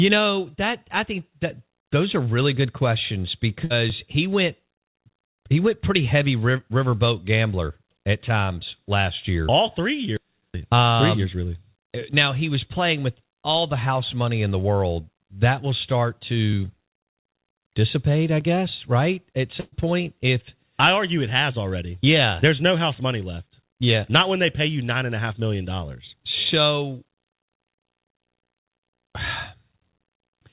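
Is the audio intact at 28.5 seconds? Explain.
Yes, at 28.5 seconds the speech comes through intact, with only the narrowband sound of the call path, which carries nothing above 4 kHz.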